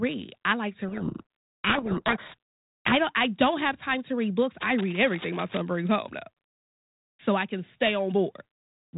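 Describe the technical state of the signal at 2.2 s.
At 2.2 s the signal is inside a codec payload misread that runs from about 0.88 s to 2.93 s. The sender and receiver disagree on the bit order of the G.726 code words, so the decoder takes each ADPCM difference value with its bits reversed. It applies wrong step sizes to its adaptive prediction, and the speech is buried under harsh, grinding distortion. The underlying 32 kbit/s G.726 path, band-limited below 4 kHz, returns after 2.93 s.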